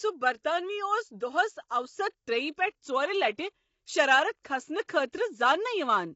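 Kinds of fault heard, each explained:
Low-delay AAC compression: The speech is rough and grainy throughout, with nothing above 7.7 kHz, which fits the likely cause, short-frame AAC-ELD at around 24 kbps.
Pre-echo: Codec noise spreads backward before sharp attacks, giving brief hiss and softened onsets at 0.43 s, about 18 ms ahead, and from 5.08 to 5.13 s, about 57 ms ahead.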